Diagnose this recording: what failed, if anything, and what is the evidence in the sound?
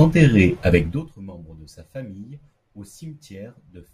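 Zipper noise in the gain stage at the driver or buffer level. From 0.77 to 1.13 s, just before "membres de sa famille", the speech drops roughly 25 dB with a zipping tick. The gain moves unsmoothed in 2 dB steps, about fifty per second, consistent with once-per-buffer updates.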